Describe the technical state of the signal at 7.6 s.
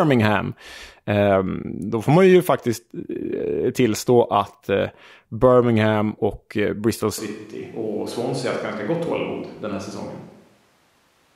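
At 7.6 s the speech sounds roomy and thin, about 5 dB quieter with more room noise. That runs from 7.18 s to the end, likely a switch to a distant microphone that hears more of the room.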